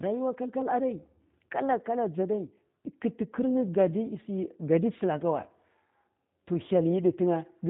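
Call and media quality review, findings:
G.729 codec damage, plainly audible, throughout the speech. Band capped near 4 kHz; sibilants dull. Speech rough and synthetic. Probable component: G.729A encoder in the VoIP leg. Each 10 ms frame is rebuilt from a vocal tract filter, pitch predictor and sparse pulses. The coarseness fits an 8 kbit/s stream.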